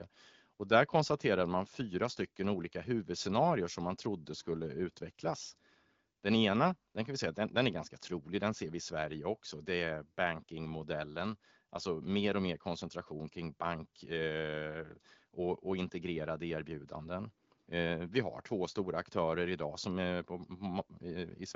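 No technical faults can be heard in this speech, which comes across as clear HD Voice wideband audio at 12.65 kbit/s.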